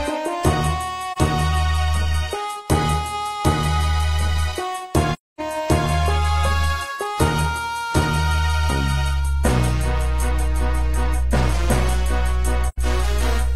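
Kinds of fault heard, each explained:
AAC frame loss with muting: at 1.12 s, 5.13 to 5.41 s and 12.68 to 12.78 s the sound drops out for about 43, 256 and 85 ms. These gaps fit one, six and two lost frames. The decoder zeroes those spectra, and overlapping windows soften each hole's edges.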